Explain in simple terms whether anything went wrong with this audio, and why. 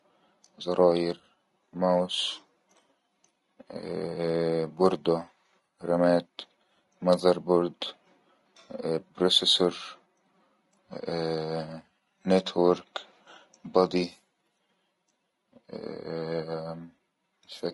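The speech sounds rough and grainy from start to finish, with hiss filling the gaps between the voice's tones. That's likely low-delay AAC compression, the kind video calls use, which slices sound into very short chunks that can't hold pitch cleanly.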